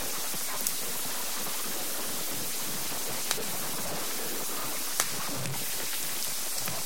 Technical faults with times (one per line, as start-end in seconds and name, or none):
0.00-6.86 low bit depth without dither